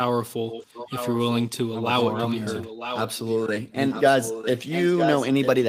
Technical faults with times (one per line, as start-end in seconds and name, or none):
0.50-1.49 echo leak
1.92-3.47 echo leak
3.90-5.69 echo leak